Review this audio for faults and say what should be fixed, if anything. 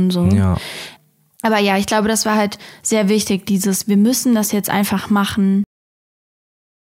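The speech has a cut-off end: at 5.64 s it stops mid-sound and drops straight to digital silence with no decay, which holds to the end. The final buffers were never written out, so the tail just vanishes. Flush and close the recording properly before stopping.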